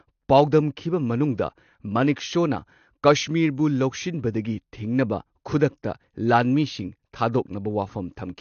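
A speech recording with plainly audible codec damage from start to finish. Nothing sounds above 6.6 kHz, so the top end is dull. Sibilants and sustained sounds smear and warble. The likely cause is AAC compression, which fits AAC-LC at a low bitrate near 32 kbps.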